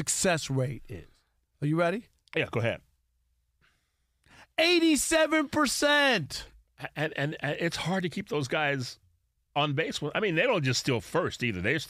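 No technical faults can be heard anywhere in the speech. There is nothing in the audio to mark at any point in time.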